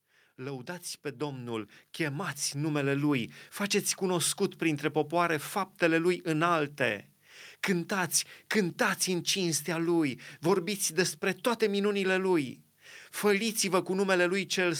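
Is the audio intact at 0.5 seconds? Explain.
No. At 0.5 s the speech sits inside an automatic gain rising span that runs from 0.05 s to 3.38 s, ending just before "faceți cunoscut printre popoare". The gain control judged the input too quiet and raised its gain gradually, by about 11 dB across that span. Because the gain acts on the whole signal, voice and background swell together rather than the voice alone getting louder.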